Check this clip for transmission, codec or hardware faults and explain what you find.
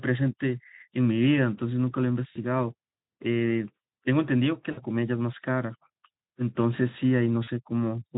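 There are three dropouts from VoIP packet loss concealed by the speech codec, heard through a lightly coded Speex stream.

They occur at 2.31–2.37 s, 4.71–4.81 s and 7.43–7.50 s. The gaps are about 40, 60 and 40 ms, which fits two, three and two 20 ms frames. The decoder extends its last pitch and filter with falling gain, so the sound turns into a buzzy tone or coloured noise that fades. On a spectrogram this shows as smeared harmonics, and the waveform shows a decaying envelope.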